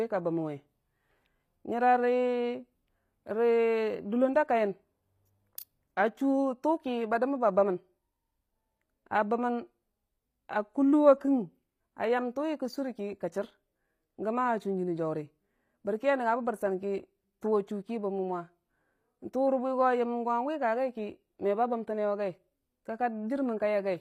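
From start to finish the speech carries plainly audible HE-AAC compression damage: s sounds come out gritty and metallic, and the bright treble lacks the fine harmonic detail of the lower range. The likely cause is HE-AAC v2 spectral band replication, which fits a bitrate near 24 kbps. On a spectrogram, the upper band looks like a shifted copy of the lower band with a coarse, blocky envelope, and nothing appears above 23.2 kHz.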